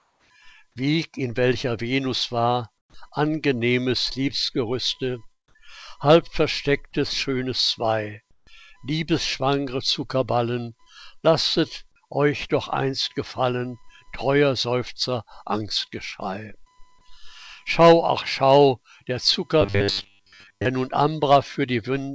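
Running under the whole clip is a faint computer activity noise, a buzzy, chirping whine pulsing at roughly 1 kHz and sitting something like 45 dB below the main sound. It rises and falls with what the machine is doing rather than with the audio itself, which is the giveaway that processor, graphics or mouse load is leaking into the audio circuit through a shared ground. The very first 0.30 s doesn't carry the real background either: it's comfort noise in place of the background, a smooth, featureless hiss about 1 dB quieter than the room would be. That's likely the sender's voice detector having muted transmission, with the receiver synthesising a noise floor to cover the gap. The same swap happens again from 2.78 to 2.94 s, this time about 4 dB louder than the surrounding background. Inside that second stretch, from 2.88 to 2.94 s, the onset is clipped by the voice detector: the sound snaps in abruptly and its first 60 ms or so are simply missing. 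That's likely because the detector was late to notice activity had resumed and the receiver kept filling with synthetic noise until real packets arrived. At 8.31 to 8.47 s, sound is dropped by the voice detector: about 100 ms of genuine sound disappears into steady noise across a 160 ms stretch, most likely because the detector took a quiet passage for background and stopped sending until it re-triggered. There's short concealed packet loss at 10.83 to 10.88 s, where about 40 ms never arrived and roughly 30 ms of extrapolated fill smears over the hole before blending back into the real audio, giving a brief wobble. A smaller one at 13.88 to 13.91 s loses about 20 ms and patches 12 ms. Finally, from 19.61 to 20.65 s the audio turns into robotic sound from repeated short buffers, a rigid, metallic buzz at 100 Hz. The likely cause is the playback software looping the last chunk over and over while new audio arrives too slowly, with most of the real material in that second skipped, and that pitch fits a 10 ms buffer. 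The call path underneath sounds like a G.722 wideband link at around 64 kbps, with nothing above 8 kHz and the light coding grain you'd expect from that codec.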